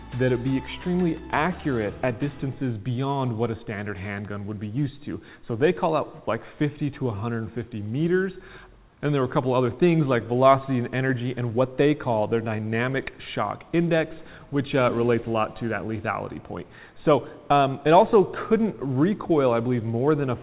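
Nothing is technically wrong with this audio; it came through a G.711 call path, so there is nothing above 4 kHz.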